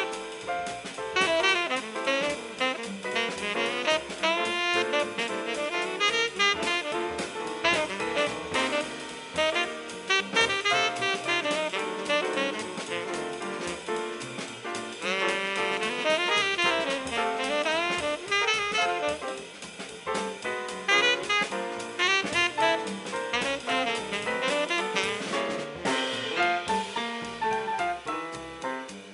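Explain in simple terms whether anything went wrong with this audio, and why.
Nothing went wrong here: no dropouts, clicks, distortion or glitches anywhere in the recording.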